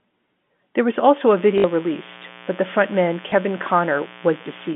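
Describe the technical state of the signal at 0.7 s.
At 0.7 s the signal is intact, carried through the G.711 telephone coding path with its usual narrow line band of roughly 200 Hz to 3.5 kHz.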